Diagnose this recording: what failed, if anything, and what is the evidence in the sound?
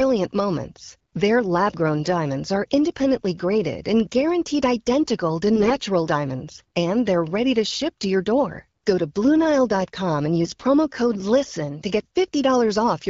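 AMR bit errors on the network link: speech turns hoarse and gargly at 5.56 to 5.76 s and, rougher, 10.44 to 10.64 s. Pitch and level hold, unlike the gaps of packet loss.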